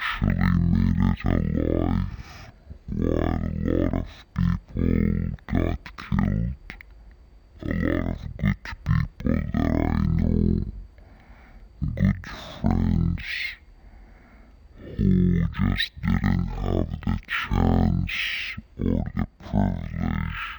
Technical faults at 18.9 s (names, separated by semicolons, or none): stereo read as mono